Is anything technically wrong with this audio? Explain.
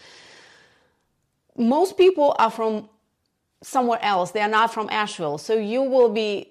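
Yes, there's hard clipping in the speech at 2.00–2.45 s, 4.55–4.62 s and 5.99–6.05 s. The level overshot what a stage could pass by about 3, 2 and 1 dB, so the peaks got flattened, adding high harmonics you can hear as distortion on those peaks.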